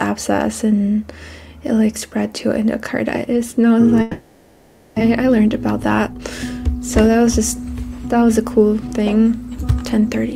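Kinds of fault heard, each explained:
Long network dropout: Audio likely stopped arriving from about 4.01 s to 5.02 s, and the receiver filled the whole gap of nearly one second with concealment, stretching the last sound into a buzz that fades. About 600 ms of the original audio was never played, so when sound returns at 5.02 s it resumes further on. Because it is delayed but not silent, the listener hears a droning smear followed by a jump.
Jitter buffer speed-up: After the dropout the buffer held roughly 400 ms more audio than it wanted. From 5.08 s to 8.38 s the receiver trimmed short pitch-period slices again and again to work that excess off, playing the audio at about 111% speed. The pitch stays the same, but everything in those three seconds sounds rushed until the buffer settles back to its target delay.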